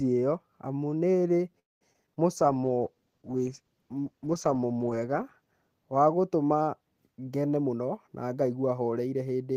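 In this speech clip, the network most likely held packets back long enough for the jitter buffer to run empty, producing a call audio freeze from 1.59 to 1.84 s, just after "ĩo amu nĩĩrĩ". The receiver stretched the last sound into a brief fading buzz and then went silent for about 200 ms. When the packets arrived the audio resumed where it had stopped, so nothing is lost but a gap of about 215 ms has been inserted. Shortly after, three bursts of short concealed packet loss at 1.93, 2.06 and 2.15 s each lost about 40 ms that never reached the decoder in time. Each is patched by extending the preceding sound and blending back, which gives a quick smear or wobble, and each skips roughly 30 ms ahead. From 2.37 to 6.08 s a call bitrate drop follows a fall in the bandwidth estimate, which cut the encoder from 32 to 13 kbps and held it at the lowest rate for about 2.5 s. The coarser coding makes the sound rough and watery, with the top end dulled. 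Overlapping this, a jitter buffer slow-down from 2.46 to 3.19 s rebuilds the buffer's reserve by repeating pitch periods. The audio plays at about 88% speed at unchanged pitch and gains about 93 ms, so sounds are drawn out. Near the end, a jitter buffer speed-up from 7.55 to 9.22 s trims excess buffered delay by removing short pitch-period slices. That section runs at about 113% speed, sheds roughly 200 ms and sounds hurried while the pitch stays the same.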